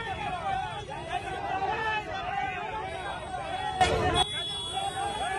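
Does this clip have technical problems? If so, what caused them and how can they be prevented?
Yes. A sudden gain jump, likely from a digital gain setting applied instantly rather than ramped, lifts the sound and its background noise together by about 13 dB from 3.81 s until it drops back at 4.23 s. Ramping every gain change over several milliseconds prevents this.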